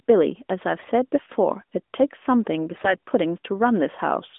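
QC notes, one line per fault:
0.76–0.88 s and 2.72–2.94 s, AMR bit errors: the voice turns hoarse, scratchy and gargly, while pitch and level hold. Around one bit in twenty arrived flipped in the weakly protected parts of the AMR-NB stream, so excitation pulses and fine spectral values land wrong.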